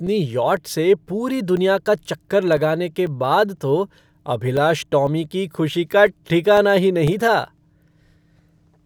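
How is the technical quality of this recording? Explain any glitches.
The recording has a regular clicking fault. From 0.07 s to 8.58 s there are periodic USB or driver dropouts every 0.5 s, about twenty in total. A background task stalls the audio path at that interval and roughly 2 ms is replaced by silence each time, heard as evenly spaced ticks over the speech.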